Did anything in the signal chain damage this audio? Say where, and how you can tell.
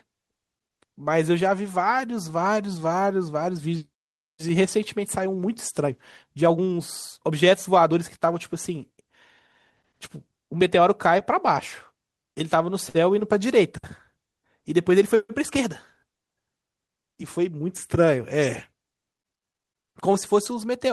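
Yes. Short stalls from late packets occur at 12.23–12.27 s and 12.89–12.97 s, at the network and jitter-buffer stage. Twice a packet missed its playout time and the buffer ran dry, so the receiver stretched the last bit of speech to cover the gap: about 20 ms the first time, 55 ms the second. Then it resumed exactly where it stopped. No speech is lost, but a sound is held unnaturally long with a faint buzzy dip, and playout delay grows by those amounts.

A jitter buffer speed-up runs from 15.66 to 16.13 s, at the same receive buffer. Having built up extra delay, the receiver drained it by cutting many short pitch-period slices from the speech, about 40 ms in total. Over that half second the speech runs at roughly 107% speed while its pitch stays unchanged. It sounds slightly hurried rather than higher, which is how time-scale compression differs from a sample-rate error.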